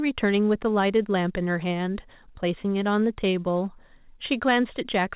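Nothing goes wrong here; the speech comes over a WebRTC call path with nothing above 4 kHz, which is just the normal narrowband sound of a G.711 mu-law call.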